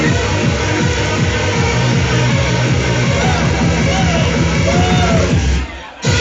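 From 0.11 s onward, clock slip clicks form a soft rattle, roughly every 30 ms. Unsynchronised clocks, likely about 700 ppm apart, slip single samples.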